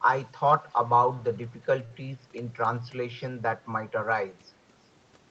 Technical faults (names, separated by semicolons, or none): short stall from a late packet